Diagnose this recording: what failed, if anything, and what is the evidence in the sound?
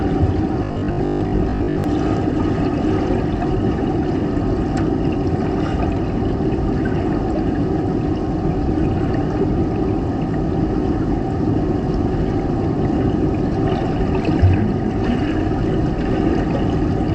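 From 0.64 to 1.84 s the sound turns into a rigid, metallic buzz at 50 Hz, robotic sound from repeated short buffers, likely a driver or buffer underrun: a 20 ms block repeats in place of roughly half the audio. A spectrogram shows evenly spaced 50 Hz harmonic stripes, and the waveform shows identical repeating cycles.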